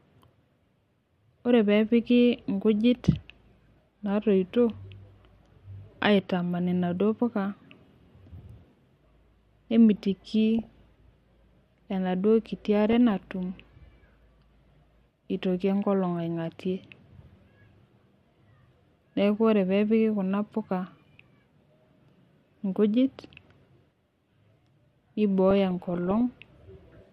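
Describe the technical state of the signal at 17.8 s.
At 17.8 s the signal has DAB burbling. It runs from 17.52 to 18.19 s. Weak reception lets bit errors slip past the error correction into the MP2 audio stream, at a rate of roughly a few tenths of a percent. Corrupted samples put short blips of noise in single sub-bands, and corrupted scale factors make individual sub-bands leap in level for up to a frame. Over the speech this sounds like a burbling patch of blips.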